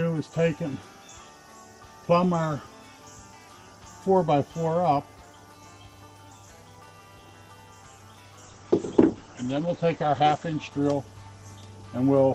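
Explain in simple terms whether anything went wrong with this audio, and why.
Something does go wrong, starting at 8.45 s and lasting to the end at 12.34 s. This is a call bitrate drop. The call's connection seemed to shrink, so the sending side squeezed the audio into far less data. The sound turns rougher and duller. The bright top end above about 8 kHz disappears, so everything sounds muffled. It stays at its worst for about 2 seconds, and the clip ends before it recovers.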